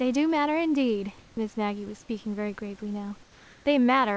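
Speech over a call link with nothing above 8 kHz, where the background in two pauses, 1.19 to 1.37 s and 3.23 to 3.65 s, becomes comfort noise: steady, featureless hiss rather than silence, unlike a gate or dropout, the second about 2 dB quieter, likely from discontinuous transmission.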